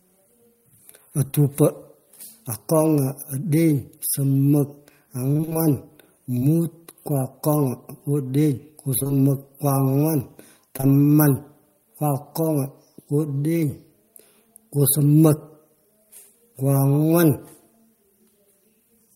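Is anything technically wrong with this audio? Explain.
Yes. Around 1.27 to 1.35 s and again around 10.77 to 10.85 s there is a brief smear or wobble where the sound seems to stall. This is short concealed packet loss. At each spot, two back-to-back chunks of about 20 ms arrived too late. The receiver bridged them by extending the preceding sound and then blending back into the real signal.

From 5.33 to 6.43 s, and more densely from 8.99 to 9.11 s, the sound turns choppy. This is repeated packet loss with robotic sound. Holes of up to about 25 ms recur in quick succession, and each is patched by continuing the last sound. The patches fill about an eighth of the first stretch and roughly half of the second, so pieces of the original go missing.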